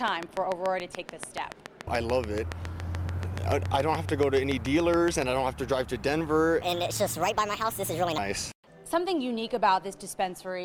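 From 0.08 to 5.23 s, a train of clicks ticks steadily at seven per second, some forty in all, well above the sound. Interference is the likely cause.

From 6.61 to 8.18 s, a section at the wrong speed plays 1.43 times too fast. Pitch jumps about seven semitones. A clock mismatch is likely.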